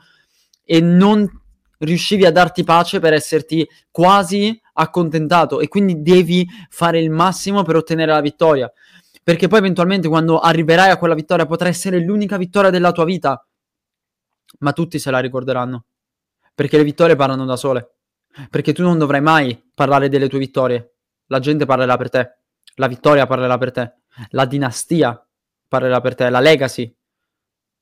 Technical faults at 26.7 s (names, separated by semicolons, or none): hard clipping